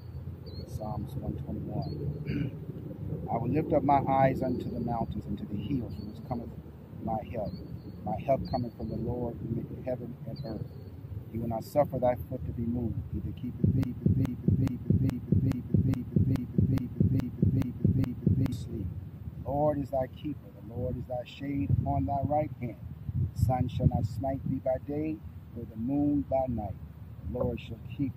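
A broken-record loop runs from 13.83 to 18.52 s, repeating one 0.42 s fragment eleven times, likely from a stalled stream resending its last buffer.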